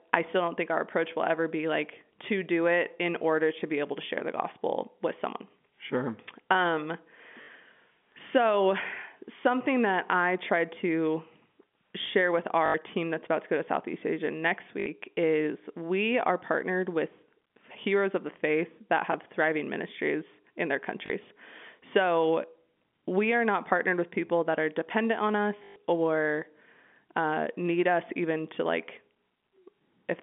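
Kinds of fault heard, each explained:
Chunks out of order: a brief jumbled flick at 4.17 s, just after "to be able to", and again at 19.12 s. A 10 ms slice of audio plays two slices, then one slice, late, so nothing is lost but hard joins break the flow.
Packet loss with last packet repeated: short robotic, buzzy stutters at 7.42, 12.66 (after "share with"), 14.8, 21.06 and 25.64 s, lasting 40 to 120 ms. Lost packets were filled by replaying the last one, and the 50 Hz buzz fits 20 ms packets.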